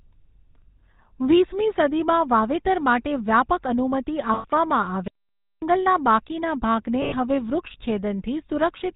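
Speech carried through the GSM full-rate codec, whose pulse-driven vocal-tract model and 4 kHz band limit leave the whole clip buzzy and gravelly, with plainly audible codec damage and a dull, narrow top end that fits a 13 kbps GSM stream. At 4.34 to 4.46 s, just after "વાવેતર માટે વ્યાપક અનુમતિ", and again at 7.02 to 7.15 s, after "બાકીના ભાગને", lost GSM frames were concealed by repeating the last good frame. Each gap of about 100 ms, which fits five missing 20 ms frames, becomes a brief rough, metallic ring in place of the speech. Between 5.08 and 5.62 s the output likely suffered a playback stall, with the player starved of data or blocked, so the sound drops to silence for about 0.54 s before resuming with "બાકીના ભાગને હવે".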